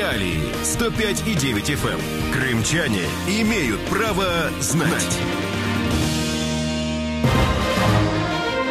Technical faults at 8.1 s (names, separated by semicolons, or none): doubled audio track